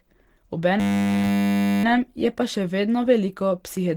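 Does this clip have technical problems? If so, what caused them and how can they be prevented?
Yes. A system hang loop runs from 0.80 to 1.84 s, ending just before "je pa še vedno". The machine stalled while the sound hardware kept replaying one 10 ms stretch of its buffer, so the speech freezes into a steady 100 Hz buzz, with almost nothing lost afterwards. Keeping drivers stable and audio threads unblocked would prevent this.

Opus compression throughout: the speech sounds hoarse, rough and grainy, with plainly audible damage. This is the likely result of a low bitrate that pushed the encoder into its hybrid speech mode, which fits about 16 kbps. Encoding at a higher bitrate would prevent it.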